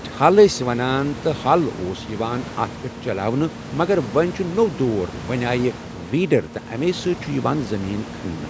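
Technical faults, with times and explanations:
No technical faults are present: the speech carries the normal signature of a call's microphone processing, with nothing above 8 kHz, and the room's background noise sits about 15 dB below the speech.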